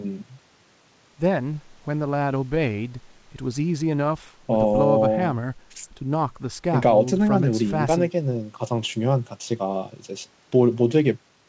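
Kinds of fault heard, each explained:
No faults can be heard in this speech recording.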